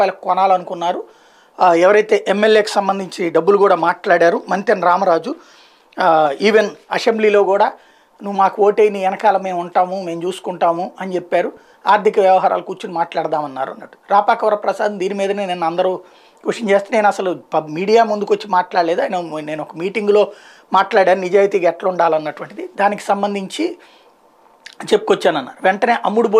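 From 11.52 to 11.87 s the audio breaks into DAB burbling, short blips of noise and sudden level jumps in single sub-bands laid over the programme. Weak reception let bit errors, at a rate of roughly 0.15 percent, slip past error correction into the MP2 data, so corrupted samples put short noise blips into single sub-bands and corrupted scale factors threw sub-bands to the wrong level for up to a frame. 19 frames were damaged. A spectrogram would show blocky, frame-length bursts confined to narrow frequency bands, and the waveform would show sudden level jumps within that stretch.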